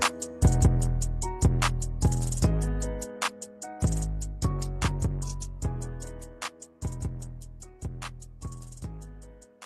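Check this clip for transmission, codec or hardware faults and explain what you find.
No transmission, codec or hardware faults.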